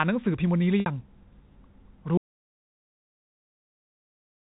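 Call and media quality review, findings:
Packet loss with pitch repetition, 0.80 to 0.86 s: brief held, buzzy tone bridging a 60 ms gap, which fits three lost 20 ms packets. Receiver concealment repeating the last pitch period.

Audio dropout to silence, 2.17 s through end of clip: abrupt cut mid-flow to silence, no fade, no room tone, nothing returns. Likely input or link loss with encoder still writing silence. Distinct from concealment: no buzz, no decay, no cross-fade.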